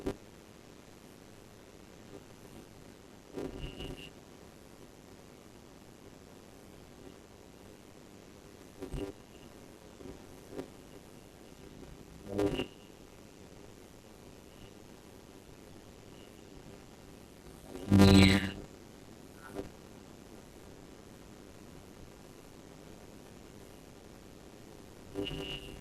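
From start to finish the speech carries a steady 100 Hz buzz, the signature of a block size mismatch (padded). One stage delivers shorter blocks than the next stage consumes, and the shortfall in each block is filled with silence. The result is a brief gap repeating 100 times a second, which fits 256-sample writes into 480-sample reads. The padding stretches the audio to 0.533 times normal speed, while the timbre stays.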